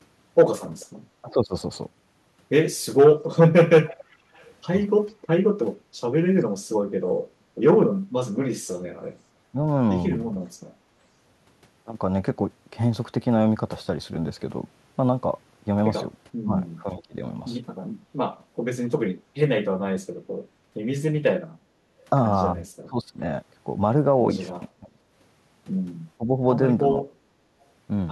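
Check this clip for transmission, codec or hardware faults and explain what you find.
Three echo-canceller faults occur on a loudspeaker call.

From 0.8 to 8.78 s, an echo leak is the likely cause: the far-end canceller let loudspeaker pickup return, so a faint copy of the speech follows about 0.44 s later, roughly 25 dB down.

Speech suppressed in double talk happens at 1.21–1.54, 9.52–9.56, 16.44–17.16 and 22.87–27.05 s. The canceller likely mistook overlapping talk for echo, so the speech dips by roughly 5 to 25 dB in brief pieces.

Background gated by the echo canceller occurs at 4.16–5.97, 21.74–21.95 and 27.44–27.57 s. The microphone was clamped during playback, so the room sound drops by about 10 to 11 dB for a moment before returning.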